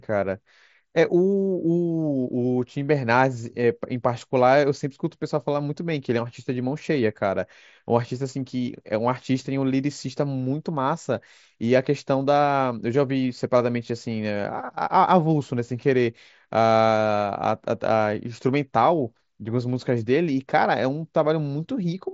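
Nothing goes wrong in this speech clip; it's simply coming over a Bluetooth mSBC headset link, so there's nothing above about 7.7 kHz.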